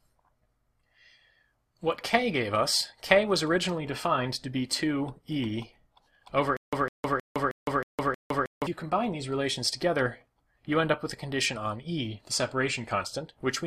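A stretch of audio with a stutter with silent gaps from 6.57 to 8.67 s: the same 155 ms fragment comes back six times, each followed by 160 ms of dead digital silence, a steady 315 ms cycle. That's likely a stalled player or stream replaying its last chunk on each retry, so whatever should have played there is simply gone.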